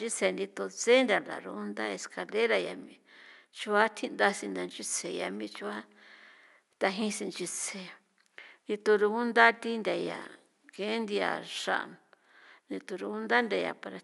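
Nothing goes wrong anywhere in this speech recording, and the only other thing you can hear is a faint bit of room noise sitting about 50 dB below the talking, which is just the space the microphone was in.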